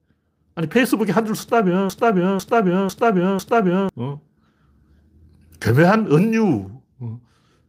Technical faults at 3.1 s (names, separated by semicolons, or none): broken-record loop